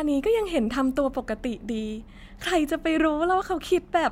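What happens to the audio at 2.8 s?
Nothing goes wrong at 2.8 s; the audio plays through that moment intact, with no dropout, click or distortion.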